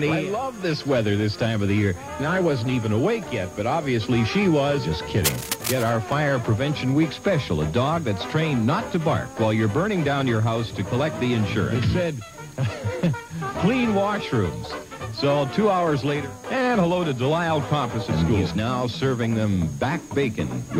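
A worn or loose cable, connector or control being moved is the likely source of the first problem, cable scratch noise: its contact resistance shifts rapidly, injecting dense, irregular bursts of noise into the signal. From 5.24 to 5.92 s this is heard as a harsh scratching, rustling layer over the audio, loud enough to sit only about 5 dB below the sound itself, so it is clearly intrusive for that two-thirds of a second. Shortly after, an overlap between stream segments occurs: two consecutive segments carry time stamps that overlap, and the player discards the overlapping span even though the audio there was not actually duplicated. From 6.12 to 6.16 s roughly 37 ms of material disappears and the waveform jumps abruptly, producing a tiny skip. Its position fits a boundary between segments about 6 s long.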